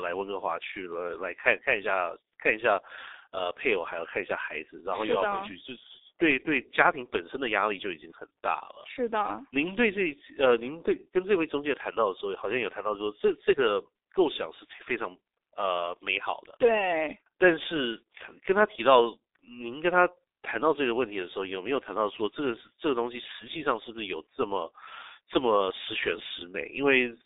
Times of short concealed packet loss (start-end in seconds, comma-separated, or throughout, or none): none